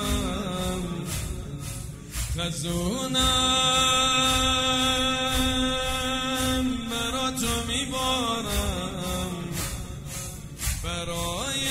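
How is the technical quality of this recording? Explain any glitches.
No technical faults are audible.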